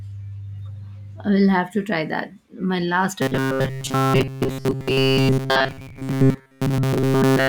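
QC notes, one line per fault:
3.22–7.48 s, robotic sound from repeated short buffers: from 3.22 s to the end the speech turns into a rigid, metallic buzz near 133 Hz that still roughly tracks the words. The likely cause is audio arriving too seldom, so the player keeps re-playing the last slice of about 7.5 ms, the length implied by that buzz, for most of the stretch, around seven tenths of it, while the real audio in between is skipped.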